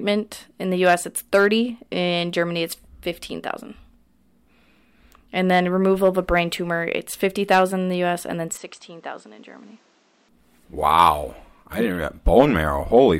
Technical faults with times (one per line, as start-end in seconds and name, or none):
8.57-10.29 input switched to a poorer device